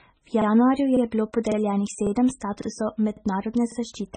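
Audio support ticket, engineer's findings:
Watery, swirly speech throughout with smeared consonants and nothing above 9 kHz; heavy MP3 compression is the likely cause. The band limit and sparse, flickering detail point to a very low bitrate, around 16 kbps, starving the encoder of bits.

Stutter-clicks at 0.42, 0.97, 1.52, 2.07, 2.62, 3.17 and 3.72 s, regular at 0.55 s spacing. Overlapping chunks: each join replays the last 50 ms of the previous chunk, consistent with half-second chunks overlapping at the boundaries.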